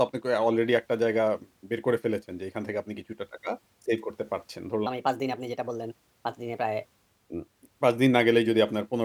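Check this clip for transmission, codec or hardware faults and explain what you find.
One fault is present. From 4.87 to 6.85 s, a section at the wrong speed plays 1.24 times too fast, likely from a clock mismatch. The speech sounds hurried and about four semitones higher.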